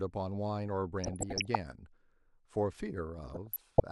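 DAB burbling breaks into the speech from 1.04 to 1.55 s and again from 3.24 to 3.80 s. Weak reception lets bit errors, here on the order of half a percent, slip past error correction into the MP2 stream, so corrupted samples put short blips of noise into single sub-bands and corrupted scale factors make sub-bands jump in level for up to a frame. Across both stretches this surfaces as short blips of noise layered over the speech.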